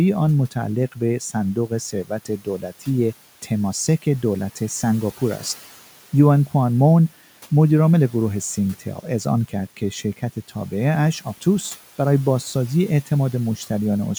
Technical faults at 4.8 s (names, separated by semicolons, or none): none